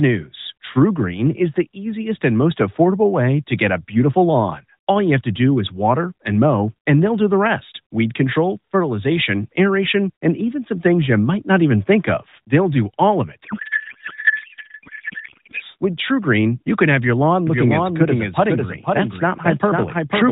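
At 13.4 s, right after "do all of", the speech collapses into garbled noise and warble that barely tracks it, until it recovers at 15.6 s. This is a codec payload misread. The receiver treats the AMR frames, sent in octet-aligned packing, as bandwidth-efficient, so every field is read from the wrong bit position and the decoder synthesises nonsense from valid-looking frames.

From 17.5 s, after "can have your lawn", and continuing to the end, a second full-band copy of the speech runs about half a second behind the original at roughly 5 dB quieter. It enters abruptly, with none of the decay or room colour a real echo would have. This is a doubled audio track, likely the same signal being picked up a second time through a slower path and mixed back in. Both copies keep the narrowband AMR character, with nothing above 4 kHz.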